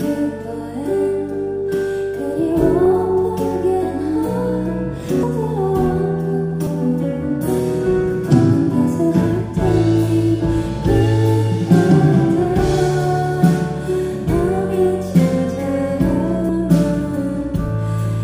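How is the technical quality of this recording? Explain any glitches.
The recording is marred by compressed frames skipped at 2.85, 5.23, 6.66 and 16.49 s. At each point whole 26.1 ms frames never reach the output, so the audio lurches forward by roughly 50 ms at the first and third, and by about 150 to 200 ms at the others. Because adjacent frames overlap, each join is a soft smeared blip rather than a sharp click, and nothing is silent, which sets it apart from a dropout.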